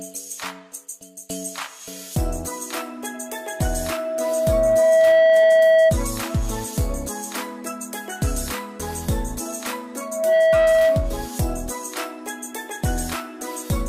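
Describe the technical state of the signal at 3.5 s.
Loudspeaker feedback squeal runs from 3.14 to 5.98 s: the microphone re-amplifies its own loudspeaker, so a 647 Hz tone swells over about two seconds to roughly 15 dB above the sound.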